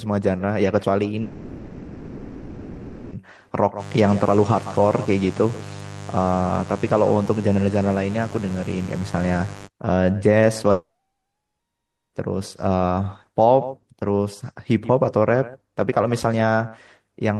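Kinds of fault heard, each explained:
Long network dropout: the sound cuts out at 1.21 s and 10.71 s, a fading buzzy fill replacing it, likely lost packets; the second settles into silence.
Mains buzz: a raspy, fairly strong 50 Hz buzz with harmonics climbing into the kilohertz range sits under the speech from 3.77 to 9.69 s.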